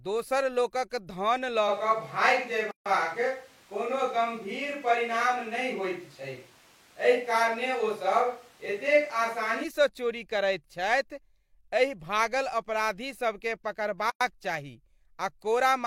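From 1.70 to 9.63 s the speech goes roomy and hollow, thinner in the bass and with more background hiss, though roughly as loud, with the room noise sitting around 30 dB under the voice. It snaps back just before "चोरी करैत छथि", so it's likely a switch to a distant microphone. Inside that stretch, at 2.71 s, there's a gap at a join of encoded pieces: a 147 ms gap with smeared edges, where encoder padding was left in, and then the speech carries on. A second one, 107 ms long, opens at 14.10 s right after "एहि भागल अपराधीसभकेँ".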